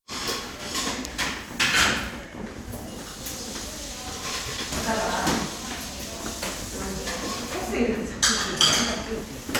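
From 8.16 s to 9.46 s, periodic USB or driver dropouts cut in: about every 0.1 s the audio path stalls and a couple of milliseconds go silent, giving roughly fifteen evenly spaced ticks. Their strict regular rhythm separates them from random network or buffer glitches.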